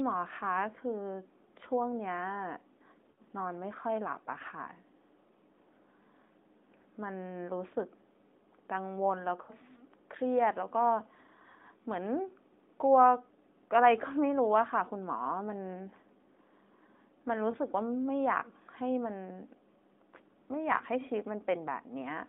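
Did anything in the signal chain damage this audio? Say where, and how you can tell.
Yes. The damage happens at the network stage, over the radio link, and shows up as lost AMR speech frames in a clip whose narrowband sound fits an AMR-NB mobile codec. The longer hits are at 3.12–3.20 s and 9.42–9.53 s. Each sounds about 60 ms long, which fits three 20 ms frames. The shorter ones at 17.52–17.57 s and 20.78–20.81 s fit single frames. When frames fail their checksum, the decoder carries the last good pitch and vocal-tract settings forward with dropping gain. The speech stretches and fades rather than cutting to hard silence or clicking, and that smeared decay is what distinguishes it from a plain buffer dropout.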